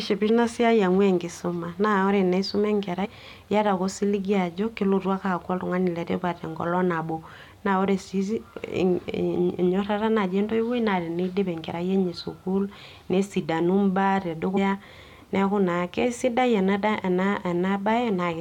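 Whole compressed frames were skipped in this speech, the decoder losing blocks that point to roughly 23 ms frames, so the audio lurches forward. At 0.28 s about a fifth of a second vanishes, some ten frames; from 3.04 to 3.06 s a few frames, around 70 ms, go; from 14.56 to 14.58 s roughly 100 ms disappears. At each join the speech jumps ahead.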